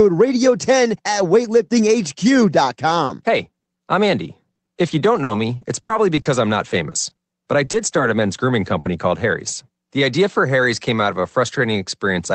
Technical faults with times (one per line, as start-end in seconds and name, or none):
3.05-3.11 short concealed packet loss
3.09-3.11 lost packet rebuilt from error correction
3.37-3.39 lost packet rebuilt from error correction
3.59-3.69 short concealed packet loss
4.29-7.99 repeated packet loss (robotic sound)
8.79-8.87 burst of packet loss
8.85 lost packet rebuilt from error correction